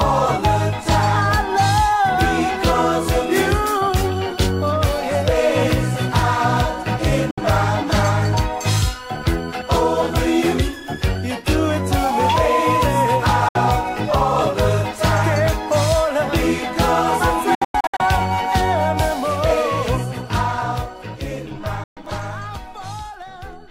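A digital broadcast dropout recurs: the receiver loses valid frames and mutes until good ones return, so the audio fades to silence within about 3 ms. The gaps fall at 7.31 s and 13.48 s (64 ms each), then as several scattered holes totalling 288 ms between 17.55 and 18.00 s, and for 128 ms at 21.84 s. Whatever was sent during each gap is lost.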